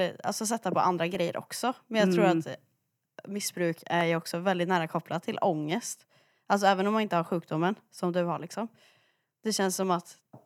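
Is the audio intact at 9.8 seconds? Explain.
No. At 9.83 s there is a single sharp click, most likely from dropped samples: a fraction of a millisecond of the stream goes missing, so the waveform jumps straight from one value to a later one with no transition. The gap is far too brief to take out any of the speech, so only the click is heard. On a waveform it shows as a sudden step, and on a spectrogram as a thin vertical line spanning the frequency range.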